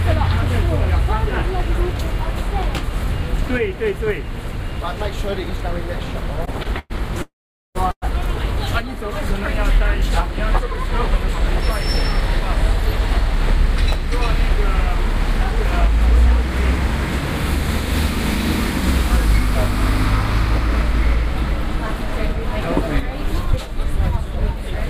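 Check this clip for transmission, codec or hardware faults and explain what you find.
Three kinds of network-related fault show up: repeated stalls between 6.45 and 8.04 s, a freeze inside that span, and two stretches of jitter buffer speed-up.

From 6.45 to 8.04 s there are repeated stalls (stutter): four short gaps, the longest 110 ms, about 0.25 s in all. Late packets emptied the jitter buffer, and the receiver extended the last sound each time. On a waveform the envelope repeatedly flattens; a spectrogram shows smeared, stretched patches.

From 7.22 to 7.77 s the audio halts in a call audio freeze, likely from a held-up burst of packets. The gap is filled for 0.53 s: the last sound is carried on and then fades, leaving 440 ms of near-silence. A spectrogram shows a blurred band decaying into a dark gap. The audio then resumes where it stopped.

From 12.59 to 17.70 s and from 23.01 to 24.76 s there is jitter buffer speed-up. 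The buffer held more audio than it needed, so short pitch-period pieces were cut, roughly 100 ms and 40 ms of audio. The sound runs about 2% fast at unchanged pitch. Splice points are invisible on a spectrogram, but events arrive slightly early against the timeline.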